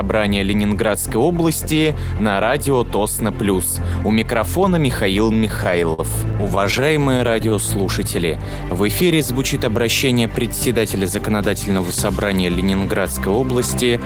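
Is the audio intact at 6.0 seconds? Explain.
No. At 6.0 s the audio is inside a run of repeated stalls (stutter) lasting from 5.33 to 7.53 s. Packets arrived late, so the jitter buffer kept running empty. The receiver stretched the last sound through 23 gaps, up to 50 ms each. Nothing is lost, but the sound drags and stutters.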